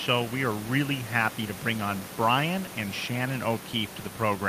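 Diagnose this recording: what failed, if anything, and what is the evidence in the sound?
Nothing failed: the only thing heard beneath the speech is the room's own background noise, about 15 dB below it, which belongs to the recording rather than to any stage of the system.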